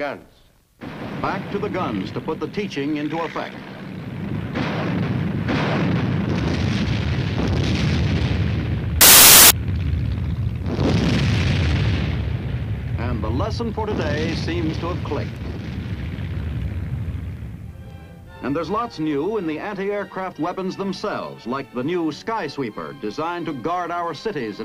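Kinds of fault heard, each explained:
samples built from the wrong bytes: a burst of loud, harsh broadband noise from 9.01 to 9.50 s, about half a second. The bytes of each sample were joined in the wrong order or offset, so the jittery low bits became the dominant part of every value.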